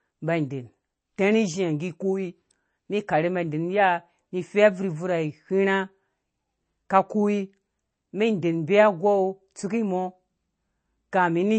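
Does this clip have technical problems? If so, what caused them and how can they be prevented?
Yes. Throughout, the speech sounds watery and swirly, with nothing above about 8.3 kHz. This is likely MP3 compression, which fits a low bitrate of around 32 kbps: the encoder cuts the treble and drops weak frequency lines frame to frame. Encoding at a higher bitrate would prevent it.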